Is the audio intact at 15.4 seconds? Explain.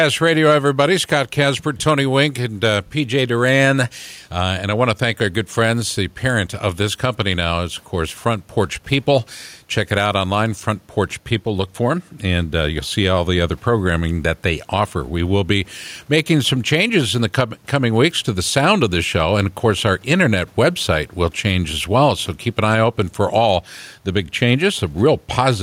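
No. At 15.4 seconds the speech carries two faults. Gain pumping runs through the whole clip. The room noise, about 42 dB below the speech, swells in the pauses and ducks by around 5 dB each time a loud syllable arrives, squashing loud and soft parts together. This likely comes from gain set too high into a fast limiter or compressor. Unlike a slow automatic gain drift, the ducking tracks each loud sound almost instantly.

Clock slip clicks also cover 15.4 seconds, within a run from 0.14 s to the end. Every 0.05 s or so, a single sample is dropped or repeated, producing a soft, even rattle of about twenty ticks per second. It is clearest on sustained vowels and absent in silence. The likely cause is two devices on unsynchronised clocks drifting apart by roughly 500 parts per million. Its strict regularity separates it from the random clicks of buffer dropouts.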